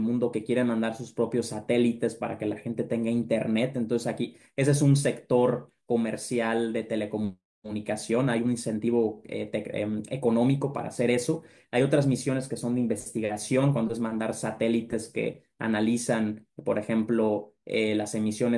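No technical faults are audible.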